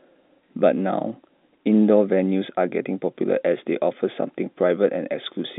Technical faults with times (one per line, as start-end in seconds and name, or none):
none